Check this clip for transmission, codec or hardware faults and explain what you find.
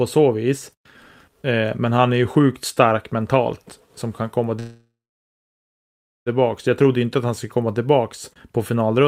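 There is one fault, a call audio freeze. From 4.59 s to 6.29 s, just after "som kan komma", packets were likely delayed in transit, draining the jitter buffer. The last sound stretches into a fading buzz or hiss, then about 1.33 s of silence. The speech resumes intact, now 1.67 s late.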